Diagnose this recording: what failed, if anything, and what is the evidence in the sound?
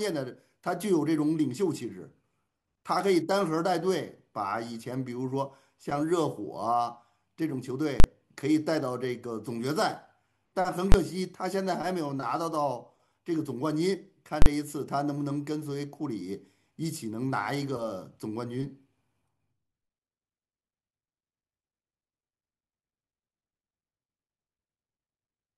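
The speech is broken three times by invalid numbers at full scale: 8.00 to 8.04 s, 10.92 to 10.94 s, and 14.42 to 14.46 s. The blocks last 40, 20 and 40 ms. Each is too short to separate into two pops, so each lands as one hard bang. The failure sits in the processing feeding sample-format conversion. A calculation produced infinite or undefined values. The conversion pinned them at the largest positive or negative code for the whole block.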